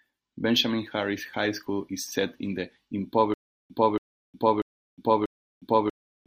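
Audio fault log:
3.34–6.27 s, stutter with silent gaps: the stream likely stalled and, at each retry, replayed the last fragment it still held before running empty again. The same 280 ms burst of speech comes back four times at an even 0.64 s pace, with about 360 ms of dead digital silence after each one. The speech that should have followed is lost, and the clip ends while the loop is still repeating.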